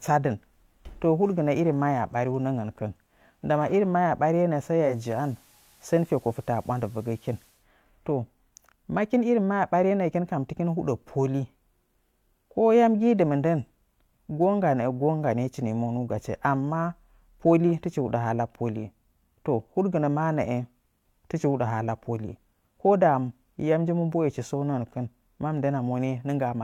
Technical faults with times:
4.81-7.67 digital radio blending to analogue

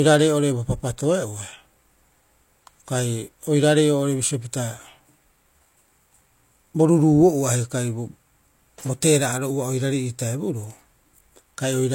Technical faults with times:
0.00-11.94 low-bitrate audio saved at a high bitrate

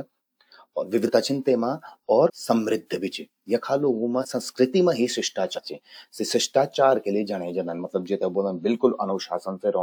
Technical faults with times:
1.05-1.09 compressed frames skipped
2.25-2.30 compressed frames skipped
4.20-4.25 compressed frames skipped
5.55-5.60 compressed frames skipped
7.78-7.80 compressed frames skipped

